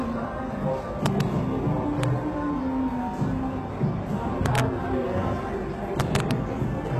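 These everyday sounds have been squeezed through a low-bitrate codec whose character points to HE-AAC compression, likely at around 16 kbps. The codec coded only the lower spectrum and rebuilt the treble by copying lower bands upward under a coarse envelope. The top end therefore sounds bright but false: transients and hiss-like detail come out gritty and metallic. Separately, an integer overflow occurs wherever a loud peak pushes the signal past the integer limit. Instead of being clamped, those samples wrap to the opposite sign and jump across the full range, producing harsh cracks far sharper than ordinary clipping. This happens from 1.06 to 1.21 s, as a single crack at 2.03 s, from 4.46 to 4.60 s, and from 6.00 to 6.31 s, each time with the level only about 1 dB or less over the limit.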